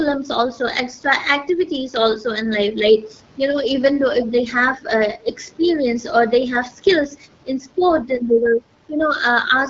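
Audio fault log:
throughout, AMR wideband (HD Voice) codec: rough, raspy speech suggests a low mode near 8.85 kbit/s; the spectrogram shows smeared harmonics below 6.4 kHz, a noise-filled band to 7 kHz, and nothing above.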